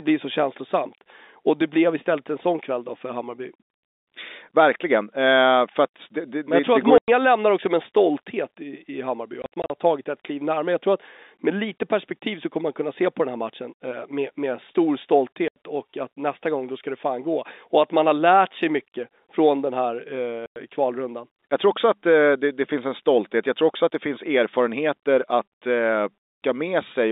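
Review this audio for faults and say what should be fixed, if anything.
Packet loss filled with silence cuts holes in the speech at 6.98–7.08 s, 9.42–9.70 s (scattered gaps over 280 ms, longest run 60 ms, just before "tagit ett kliv närmare"), 15.48–15.56 s (between "med med stor" and "och att nästa gång"), 20.46–20.56 s (after "mycket från den här") and 26.26–26.41 s. The gap lengths fit 20 ms packets. Dropped packets were replaced with silence, so each hole starts and ends abruptly. On a waveform these show as flat-line gaps with vertical edges. On a spectrogram they appear as blank vertical strips. The speech around these gaps is limited to the G.711 telephone band. Enabling packet loss concealment and a jitter buffer at the receiver would prevent this.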